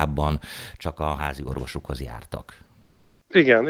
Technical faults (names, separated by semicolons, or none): one channel drops out; comfort noise in place of the background